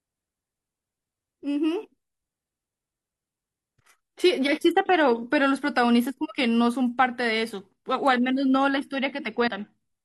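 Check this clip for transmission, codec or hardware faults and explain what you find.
One codec fault near the end. From 9.43 to 9.48 s, compressed frames were skipped: the decoder dropped roughly a tenth of a second, so the speech jumps ahead at that point.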